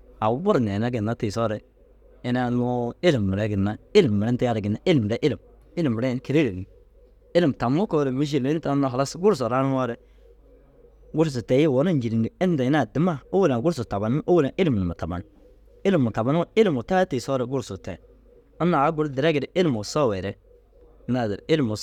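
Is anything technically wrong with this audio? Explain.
No, nothing is technically wrong with this audio.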